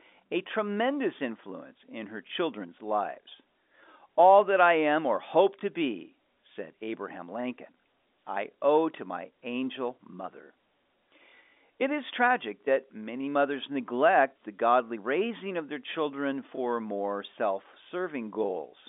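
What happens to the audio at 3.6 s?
Nothing goes wrong at 3.6 s: the speech continues intact through that moment, carried at telephone bandwidth with nothing above about 3.7 kHz, as the G.711 coding normally leaves it.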